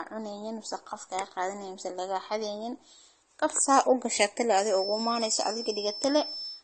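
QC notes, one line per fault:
Throughout, transcoding between lossy codecs: the speech has nothing above 9.1 kHz, and it carries two overlapping kinds of coding smear rather than one. The mix of the two codecs' artefacts heard together likely comes from the audio being encoded at a low bitrate in one codec, such as AAC, then re-encoded to MP3. The second pass spends its bits on the first pass's errors and adds its own, so both layers of damage stack.
4.64 s to the end, feedback whistle: right after "gashate le", a thin, steady tone at 5.3 kHz sits behind the speech, roughly 10 dB under it, swelling and fading slowly in level but never building up. It likely comes from a loudspeaker-to-microphone loop sitting just at the edge of feedback, with enough gain at that one frequency to keep ringing but not enough to run away into a howl.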